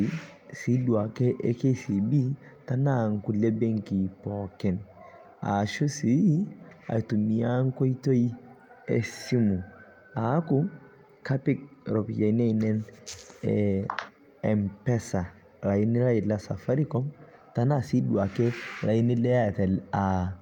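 No technical faults are audible anywhere in the speech recording.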